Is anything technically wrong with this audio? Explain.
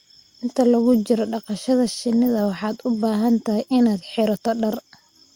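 No, nothing stood out as technically wrong on listening to this speech recording.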